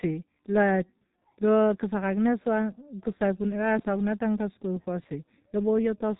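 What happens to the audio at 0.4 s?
At 0.4 s the speech carries G.723.1 codec damage, present across the whole clip. Nothing above about 3.8 kHz survives. The coarse, slowly updated voice model, fitting a rate near 6.3 kbit/s, leaves the speech muffled and hoarse, with smeared consonants.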